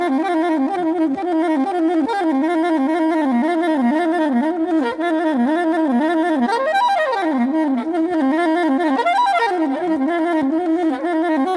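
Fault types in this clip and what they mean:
No faults are audible anywhere in this recording.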